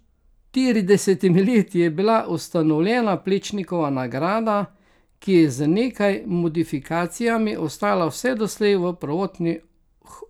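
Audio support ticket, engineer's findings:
Resampler restarted on every block, 2.7–5.3 s, after "leti je bila", until "je z nekaj modifikacijami". Regular 10 Hz ticks, fits 100 ms blocks; 44.1 kHz to 48 kHz converter filtering block edge without neighbours. Unlike dropouts: no gaps, ticks only with signal.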